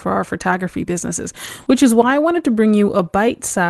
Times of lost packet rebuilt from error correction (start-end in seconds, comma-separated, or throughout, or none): 1.44-1.71, 2.10, 2.37